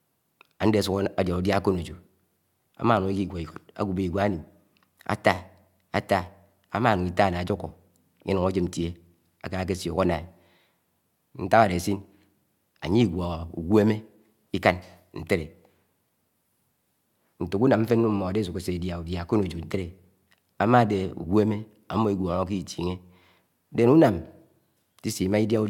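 Listening to this speech recording, nothing stood out as a technical problem at any point.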